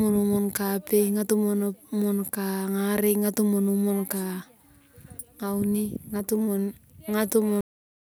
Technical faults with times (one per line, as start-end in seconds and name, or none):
7.61-8.11 cut-off end